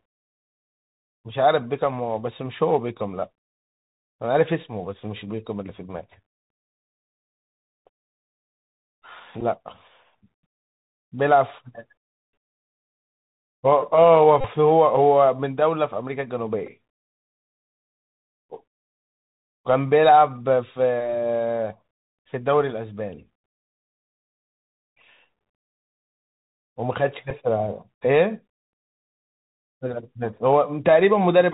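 Throughout, the Bluetooth CVSD headset codec limits the speech to below 4 kHz, with one-bit delta coding leaving granular hiss, scratchy s sounds and distortion on loud, bright peaks. Bluetooth headset packet repeats, where lost packets are replaced by replaying the last one, occur at 9.41 to 9.43 s, 14.41 to 14.47 s, 16.67 s and 27.30 s. The short ones are even briefer buzzes, and the 34 ms gap at 14.41 s is a brief buzz near 267 Hz.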